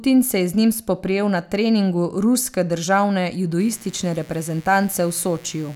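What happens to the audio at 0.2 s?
At 0.2 s the speech plays through intact, with no dropout, click, distortion or other fault at that moment.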